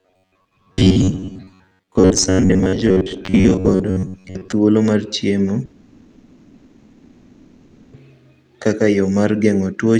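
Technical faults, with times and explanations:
0.01 to 4.53 s, robotic sound from repeated short buffers: the speech turns into a rigid, metallic buzz pitched near 94 Hz, with about half the audio seemingly replayed. That likely comes from the player looping roughly 10.7 ms chunks while fresh audio arrives too slowly.
5.65 to 7.94 s, long network dropout: roughly 2.28 s of audio is simply gone, and the receiver papers over the entire gap with a fading continuation of the last sound rather than silence. That's likely a stretch where nothing arrived over the network, and speech resumes afterwards without the missing part.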